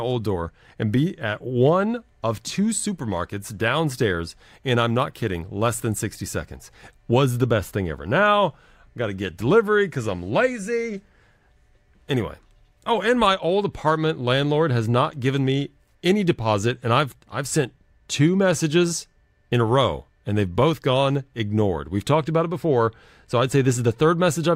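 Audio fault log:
No faults are detected in the signal.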